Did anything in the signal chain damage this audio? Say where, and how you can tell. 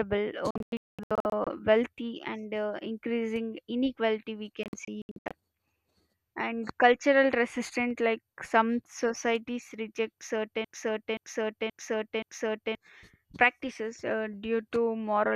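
Yes. Digital broadcast dropout, at the receiver and codec stage: at 0.51–1.47 s, just before "wealthy and uh increasing", the speech breaks into short silent holes, the longest 216 ms. Again at 4.63–5.31 s, after "uh increasing inequality we", the holes are no longer than 72 ms. Corrupted frames were muted, and the hole lengths fit 24 ms frames.

Broken-record loop, at playback: after "like some societies reject", a 0.53 s fragment repeats four times from 10.65 to 12.75 s, likely from a stalled player resending its last buffer.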